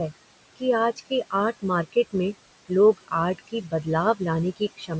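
A speech recording that has passed through call-style microphone processing, with nothing above 8 kHz and room noise sitting about 14 dB below the voice. Noise suppressor artifacts run through the whole clip. The suppressor pulls the bands it judges to be steady noise down by about 21 dB, frame by frame, so the background drops away in the gaps and comes back up under the voice.

There is also speech cut by the noise suppressor at three points, where parts of the voice were mistaken for noise and turned down with the background. From 0.96 to 1.12 s the drop reaches about 21 dB over roughly a tenth of a second. From 3.38 to 3.86 s and from 4.77 to 4.91 s it reaches about 15 dB, with around 150 ms affected in each span. In these spans, low-level consonants and word endings sound swallowed or faint.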